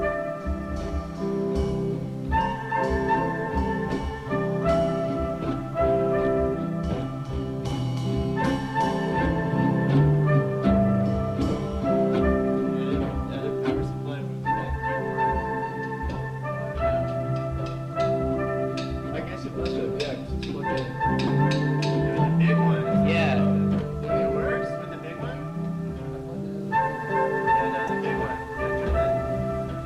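At 21.27 to 21.30 s, a corrupt frame decoded gives a sharp, fairly loud chirp, squeak or burst of noise. Damaged bits put energy at wrong frequencies, which fits about two bad frames. A shorter, quieter glitch follows at 27.87 to 27.90 s, likely one frame.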